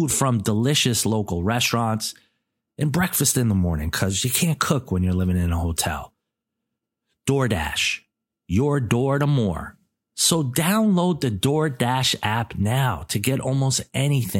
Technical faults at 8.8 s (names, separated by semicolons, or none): none